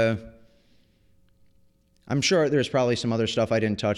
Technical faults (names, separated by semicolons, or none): de-emphasis applied wrongly